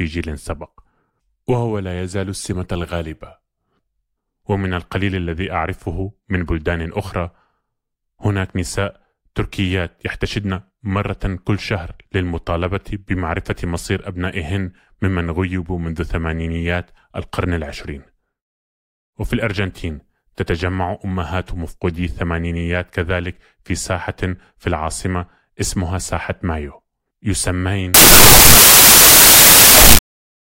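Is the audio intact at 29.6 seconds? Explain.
No. At 29.6 seconds the speech falls inside a stretch of samples built from the wrong bytes, running from 27.94 s to the end of the clip at 30.43 s. Each sample's bytes are assembled in the wrong order or alignment, so the rapidly changing low bits dominate every value. The result is loud, harsh broadband noise, close to white on the louder sounds. A waveform shows a dense block of high amplitude, and a spectrogram shows flat broadband energy.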